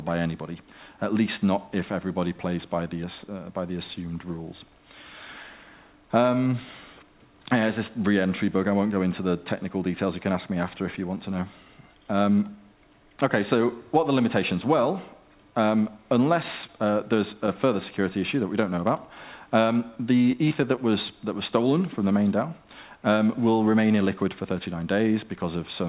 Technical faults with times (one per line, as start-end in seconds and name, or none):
16.67-16.69 short stall from a late packet
17.46 short concealed packet loss
18.76 short concealed packet loss
19.95 short concealed packet loss
20.32-20.78 repeated packet loss (robotic sound)